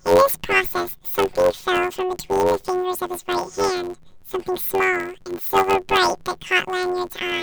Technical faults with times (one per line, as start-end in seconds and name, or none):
0.00-7.42 planar audio read as interleaved